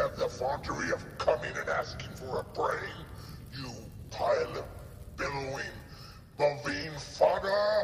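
No dropouts, glitches or distortion turn up anywhere in this one; there's simply nothing technical to flag.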